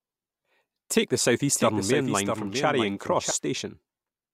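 From 1.55 s to 3.31 s, the speech carries a doubled audio track. A second copy trails by about 0.7 s, roughly 5 dB quieter, dry and full-band. It cuts in and out abruptly. A slower second capture path likely added it.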